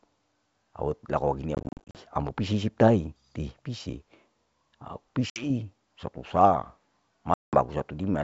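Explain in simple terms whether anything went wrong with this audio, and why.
The call dropped small chunks of data three times, a fault called packet loss on an ADPCM call. Each missing piece was filled with silence, and the receiving end briefly lost track of how loud and how fast-changing the speech was, so the speech comes back after each gap with a small click or roughness before settling. From 1.55 to 2.02 s, about a quarter second is lost in bursts, none longer than 40 ms. A 60 ms loss falls between 5.30 and 5.50 s, and 190 ms is lost between 7.34 and 7.55 s.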